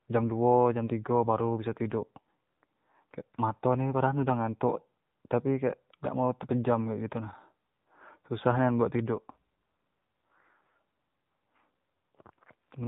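Speech, and for its whole length it carries the sound of the AMR narrowband mobile codec: nothing above 4 kHz survives, and the voice has a plainly audible buzzy, synthetic edge, which fits one of AMR-NB's lower modes, around 7.4 kbps. A plain telephone band-limit would dull the top end but leave the voice natural. Here the vocal-tract model and sparse pulse excitation, rebuilt frame by frame, add that artificial, reedy texture.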